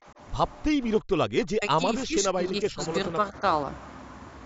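A speech clip with the voice dipping in pieces at 0.7 to 0.81 s, through much of 1.01 to 2.81 s (around one and a half seconds in all, falling by as much as about 40 dB), and more gently at 3.14 to 3.44 s (about 5 dB). The likely cause is speech suppressed in double talk, where an echo canceller turns the near talker down along with the far side.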